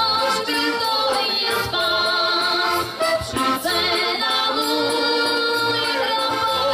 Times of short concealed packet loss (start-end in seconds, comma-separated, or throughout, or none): none